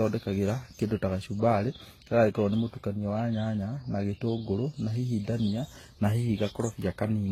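The speech was likely passed through a chain of lossy codecs, a transcoding between lossy codecs, with an early very low-bitrate HE-AAC stage, a Vorbis pass and a final HE-AAC encode. Each stage spent its bits re-encoding the previous stage's damage and added its own. Across the whole clip nothing sounds above 16.1 kHz, and the layered artefacts of the different stages are heard together in a way that no single encode would produce.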